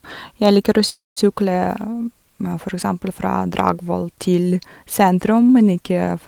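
Packets were likely held up in transit, emptying the jitter buffer and producing a call audio freeze from 0.89 to 1.19 s. The last sound stretches into a fading buzz, then about 180 ms of silence, and the speech resumes where it stopped, now running 271 ms late.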